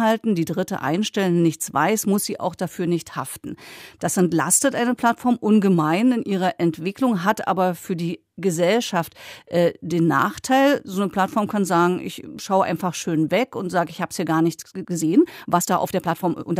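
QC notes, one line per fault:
14.56 to 16.6 s, time-stretched section: the speech suddenly rushes ahead at about 1.46 times its earlier pace and runs that way to the end of the clip, sounding hurried while its pitch stays put. This is likely software squeezing the closing stretch to fit a set length, keeping pitch steady by cutting out short slices of the waveform and splicing the remainder together, which leaves the abrupt change of tempo.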